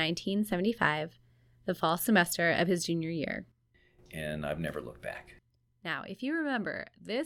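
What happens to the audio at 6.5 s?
At 6.5 s the waveform is still sitting on a DC step that began at 0.51 s and holds to the end of the clip. The zero line jumped by about -46 dBFS at that point, as when an input carrying a fixed offset is switched into the path, and it never steps back or decays. The shift itself was heard only as a low thump or click at 0.51 s. At 6.5 s the speech rides on the shifted baseline without a further click.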